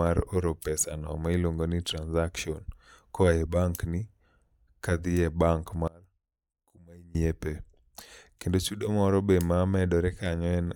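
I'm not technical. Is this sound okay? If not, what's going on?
No. From 5.88 to 7.15 seconds the voice suddenly shrinks to a faint ghost of itself, then snaps back. That's likely one channel inverted: one stereo side is flipped, so the two sides cancel each other when played together.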